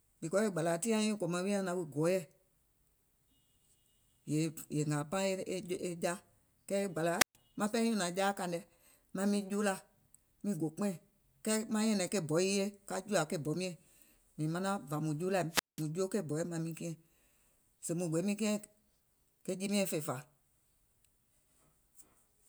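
At 7.18 to 7.36 s and 15.50 to 15.85 s there's a wireless microphone squelch dropout: the radio link fades, hiss swells, then the receiver mutes for about 130 and 190 ms.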